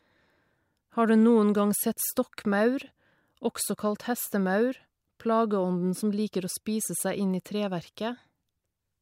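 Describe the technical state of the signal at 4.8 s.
Sample clock jitter is present at 4.8 s, as it is across the whole clip. The converter's clock wavers by around a microsecond, so samples land slightly off time, adding a hiss-like roughness roughly 35 dB below the speech that grows on loud, bright sounds.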